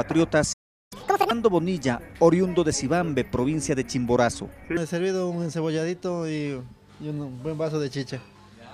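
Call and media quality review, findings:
Playback stall, 0.52–0.93 s: output drops out for about 380 ms mid-flow. Likely a player buffer underrun or blocked audio thread. Waveform shows a flat zero line, spectrogram a blank vertical gap across all bands.

Catch-up at higher speed, 0.93–1.31 s: resumes at 2x speed, pitch raised roughly ten semitones, while the player resamples its backlog. Spectrogram shows energy bands shifted upward and time-compressed. Waveform denser, then normal.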